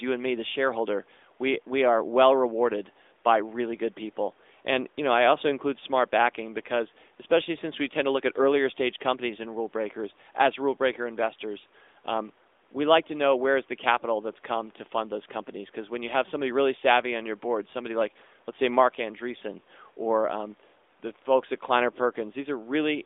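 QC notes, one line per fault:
No faults heard.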